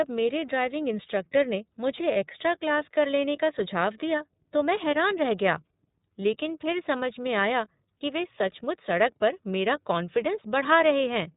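From start to finish the speech passes through the iLBC codec, and the damage is plainly audible. The sound is narrowband, cut off at 4 kHz, with a slightly rough, synthetic edge. That character fits the 30 ms frame mode at around 13 kbps, where each frame's excitation is coded on its own. On a spectrogram everything above 4 kHz is empty, and the harmonics look smeared and grainy rather than cleanly striated.

At 2.12 s, straight after "ड्राइविंग इंस्ट्रक्टर ने मुझे", lost iLBC frames cause a 30 ms gap, the length of one frame. The decoder fills it by repeating the last pitch cycle mixed with noise, so it sounds like a brief, slightly buzzy held vowel. The same thing happens at 7.98 s, between "फिर समझ में आया" and "वे सचमुच". In the waveform each gap shows as a short run of near-identical periods. On the spectrogram it is a flat, unchanging stripe, and normal speech returns at once.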